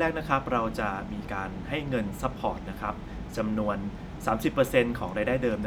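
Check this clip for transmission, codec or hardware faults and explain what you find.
No fault turns up anywhere in this speech recording. Nothing along the path it came through gives cause for comment.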